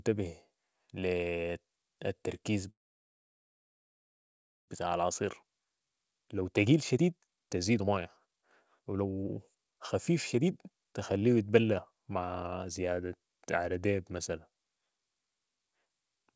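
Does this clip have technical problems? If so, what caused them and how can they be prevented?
Yes. A call audio freeze runs from 2.70 to 4.70 s: the sound stops, leaves a brief fading tail, then goes almost silent for nearly two seconds before picking up exactly where it broke off. The likely cause is packets stalling in transit until the jitter buffer ran dry, so the receiver inserted about 2 s of filler rather than losing any audio, and everything after it arrives that much later. A more stable network route, or a jitter buffer with more headroom, would prevent it.

A jitter buffer speed-up follows from 4.87 to 12.88 s, where the audio plays at about 124% speed with its pitch unchanged and sounds hurried. The late packets arrived in a burst, overfilling the buffer, so the receiver repeatedly cut out slivers a pitch period or so long, shedding around two seconds in total to return to its target delay. 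Steadier packet delivery would prevent the backlog, and a gentler catch-up rate would make any speed-up less noticeable. Throughout the clip the G.722 call path carries nothing above 8 kHz.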